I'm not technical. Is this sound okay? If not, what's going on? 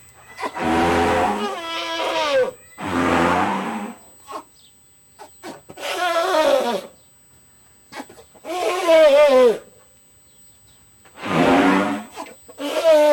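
No. A USB connection in the recording setup is leaking electrical noise into the audio. The USB bus pulls power in very rapid, regular bursts, 8,000 times a second, and that rhythm is getting into the sound through the power or ground wiring. The result is USB whine: a faint, steady, high-pitched tone at 8 kHz that never changes pitch and runs under the sound for the entire clip.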